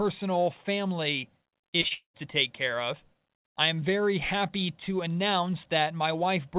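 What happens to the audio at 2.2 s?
Choppy, robotic speech from 1.48 to 2.21 s, ending before "take care of I": repeated packet loss, each dropout patched by extending the last sound.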